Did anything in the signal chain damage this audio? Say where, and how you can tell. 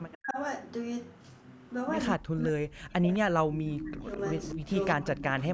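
Yes. Echo leak, from call processing. A copy delayed 209 ms surfaces at 0.12–0.18, 3.14–3.18 and 4.39–4.96 s, loudest last. Likely uncancelled loudspeaker pickup.

Speech suppressed in double talk, also call processing. The speech drops by up to about 40 dB at 0.16–0.38, 2.15–4.06, 4.55–4.61 and 4.95–5.54 s. Overlapping talk likely fooled the canceller into ducking.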